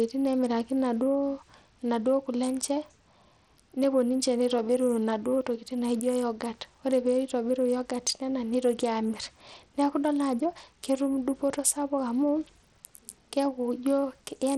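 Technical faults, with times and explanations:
Throughout, likely Bluetooth SBC compression: the speech has dull, flickering treble and a gritty, grainy edge. A small bit pool, fitting roughly 80 kbps, starves SBC's upper sub-bands of bits and coarsely quantises the rest, leaving audible aliasing.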